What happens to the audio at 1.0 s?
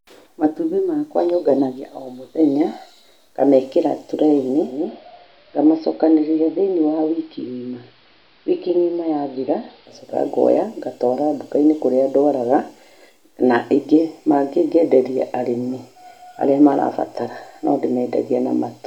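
At 1.0 s the speech continues cleanly, with no dropout, click, distortion or other fault.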